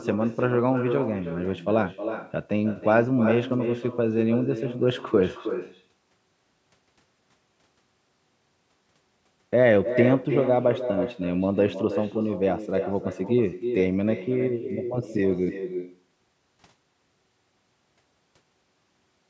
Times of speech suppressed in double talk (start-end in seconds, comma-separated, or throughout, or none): none